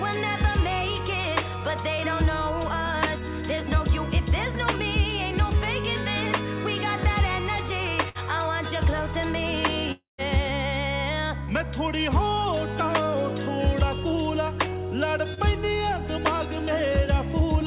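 At 8.09 s comes a burst of packet loss, ending near 8.18 s. About 60 ms of audio never arrived in time. The receiver stretched the last sound across the hole and let it fade. You hear a brief held buzz or hiss. Then the sound jumps forward, with that slice missing.

From 9.92 s to 10.21 s the sound breaks off for about 0.3 s. The last sound carries on and dies away. Near-silence follows, lasting roughly 150 ms. Then the audio returns further along. Nothing in that span is recovered. The likely cause is a long network dropout, where no packets arrived at all. The receiver could only extend what it had. Once that faded, there was nothing left to play.

Two short concealed packet losses follow, at 11.44 s and 15.34 s. Each lasts about 30 ms. The decoder missed a few hundredths of a second each time. It filled them by continuing the last sound and then blended back into the real audio. Each one is heard as a quick smear or wobble.

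Throughout, the call path cuts everything above 4 kHz, which fits G.711 mu-law at 64 kbps.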